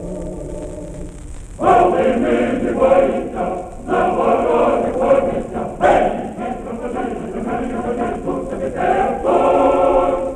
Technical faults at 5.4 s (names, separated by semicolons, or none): DAB burbling